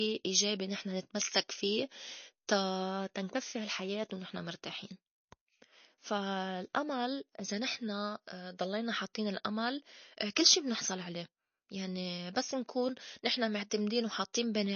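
Throughout, plainly audible watery, swirling artefacts and nothing above 6.7 kHz point to likely MP3 compression starved of bits, fitting a bitrate around 32 kbps.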